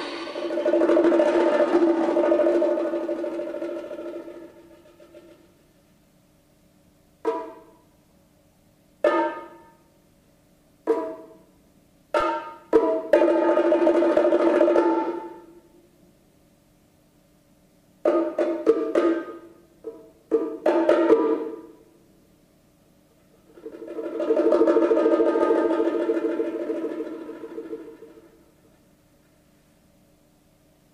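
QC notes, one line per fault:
12.20 s DC step: the waveform's zero line jumps abruptly by about −26 dBFS, producing a single low thump while the audio carries on unchanged. The offset then drains away as the 20 Hz high-pass filter pulls the baseline back toward zero. On the waveform the whole trace lifts at once and sags back along a smooth exponential curve. The spectrogram shows one brief broadband vertical line at the step, with energy concentrated at the low end.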